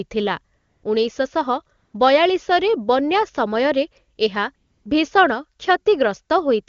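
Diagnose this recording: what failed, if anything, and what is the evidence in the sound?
AMR comfort noise from the codec's discontinuous transmission replaces the background at 0.57–0.83, 1.77–1.93, 4.15–4.17 and 4.55–4.85 s. With speech frames halted, the receiver synthesised steady noise from a coarse description of level and spectrum. A spectrogram shows flat, featureless bands with hard edges.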